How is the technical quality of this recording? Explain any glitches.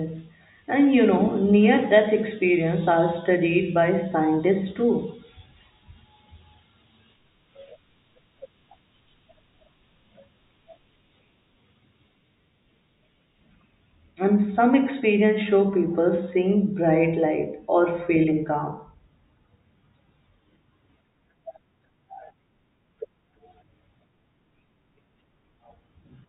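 No technical faults are audible anywhere in the speech recording, so there are no glitches to explain.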